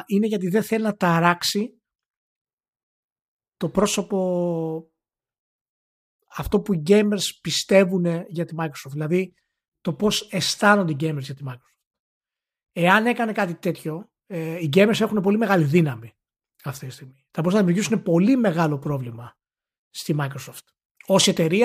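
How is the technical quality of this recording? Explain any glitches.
The recording has one glitch. From 17.64 to 18.64 s, channel delay (comb filtering): one channel lags by roughly a sample, cancelling highs near 20 kHz, so speech dulls slightly. A spectrogram shows darkened top frequencies.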